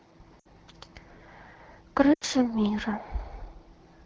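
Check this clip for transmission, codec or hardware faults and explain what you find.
Two dropouts from lost AMR speech frames occur, at 0.39–0.46 s and 2.13–2.24 s, heard over AMR-WB (HD Voice) coding. Corrupted radio frames forced the decoder to conceal by repeating the last good pitch and vocal-tract settings with decaying gain. Each gap of about 60 and 80 ms, consistent with three and four missing frames, drops to near silence within two frames before the speech returns briefly weak or rough.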